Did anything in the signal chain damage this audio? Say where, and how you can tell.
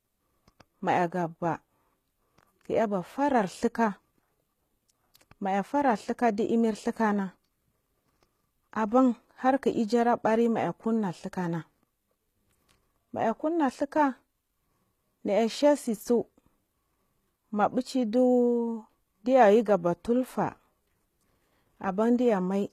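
Yes, at the codec stage: the whole clip sounds like HE-AAC compression, likely at about 20 kbps, with gritty, lispy sibilants from replicated treble and nothing above 14.9 kHz.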